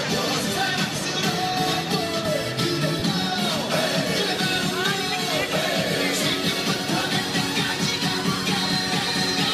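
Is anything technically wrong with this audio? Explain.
Yes, there is one fault. Lost LE Audio frames occur from 2.99 to 3.02 s, a gap of about 30 ms, which fits three 10 ms frames. The LC3 decoder fills the hole by repeating the last spectrum with randomised signs, so the sound briefly smears into a noisy blur. The light lossy compression elsewhere causes only slight damage.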